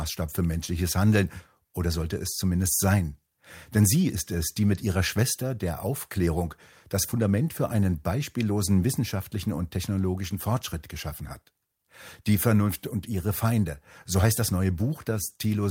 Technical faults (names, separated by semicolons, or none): clock drift between sender and receiver; repeated timing corrections